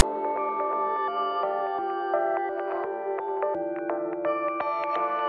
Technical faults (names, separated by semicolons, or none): file tags played as audio